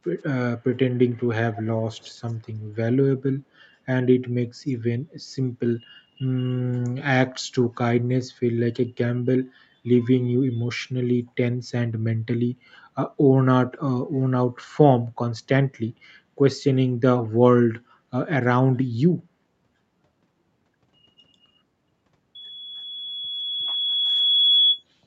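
Faint, delayed repeats of the speech trail the original by about 117 ms at 0.91 to 1.27 s, 1.52 to 1.66 s, 1.95 to 2.33 s and 4.66 to 4.73 s. They sit roughly 20 to 35 dB down. This echo leak is likely a far-end speakerphone whose echo canceller let residual pickup return.

From 22.35 s a single tone at 3.4 kHz swells over about two seconds into a loudspeaker feedback squeal, ending near 24.84 s at roughly 5 dB above the signal. The microphone hears its own loudspeaker, and the loop gain at that frequency exceeds one.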